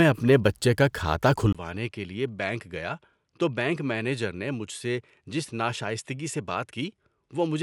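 Input switched to a poorer device at 1.53 s, lasting to the end of the clip. After a brief silence of about 20 ms, the speech drops by around 10 dB, loses everything above 11.4 kHz, and sits on a new, faint background noise well below it. The sound turns duller than in the opening second and a half. The likely cause is the recording input changing mid-take to a lesser microphone with a narrower band, its own gain and its own noise.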